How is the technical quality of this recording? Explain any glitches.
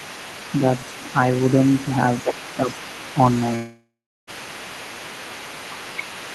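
The recording has three clear faults: a faint second voice throughout, a brief dip in the main speech, and a long gap.

From 0.0 to 6.3 s, other side's voice leaking through: the echo canceller likely left loudspeaker playback in the microphone, so a second voice sits about 20 dB below the speech.

From 2.33 to 2.68 s, speech suppressed in double talk: the canceller likely mistook overlapping talk for echo and ducked both, so the speech drops by roughly 15 dB for about 0.3 s.

From 3.55 to 4.30 s, long network dropout: about 0.72 s of audio likely never arrived. The receiver stretched the last sound into a fading buzz or hiss, then roughly a third of a second of silence, and the speech resumes with that part missing.

The slightly dulled top end, with nothing above about 12 kHz, fits an Opus call path at around 32 kbps.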